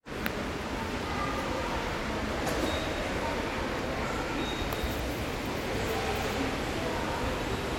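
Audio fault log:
3.32–6.29 s, train of clicks: likely outside interference injects about twenty similar pulses, roughly 7.8 per second at uneven spacing, ticking about 5 dB above the sound.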